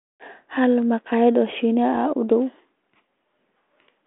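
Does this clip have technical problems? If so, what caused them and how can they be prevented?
Yes. Bit errors on an ADPCM link cause a rough pop from 1.95 to 2.01 s. Flipped bits upset the decoder's step size and predictor, so the damage rings on briefly. The waveform shows a spiky burst with a level jump, and the spectrogram shows a broadband vertical smear. Stronger radio coverage or error protection on the link prevents this.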